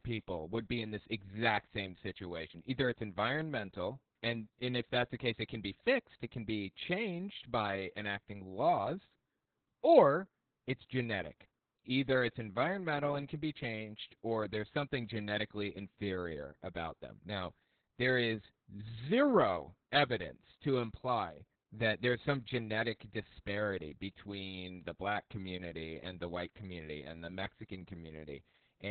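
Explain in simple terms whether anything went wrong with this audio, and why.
Opus voice compression affects the whole clip, from start to finish. The speech was squeezed hard to save space, so everything above about 4 kHz is cut away and the voice is rebuilt roughly, leaving it muffled, hoarse and slightly robotic throughout.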